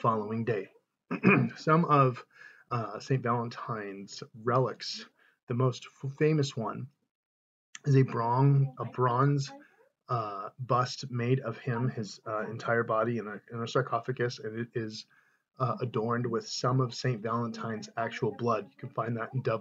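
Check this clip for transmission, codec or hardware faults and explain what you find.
Nothing in the clip points to a transmission, codec or hardware fault. The sound holds steady throughout, with no breaks, glitches or disturbances to report.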